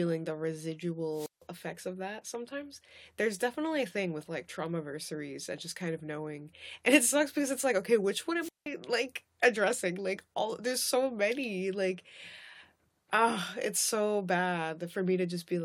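Wireless microphone squelch dropouts interrupt this speech clip at 1.09–1.44 s and 8.40–8.66 s: a fading radio signal lets hiss rise, then the receiver mutes for about 160 and 180 ms.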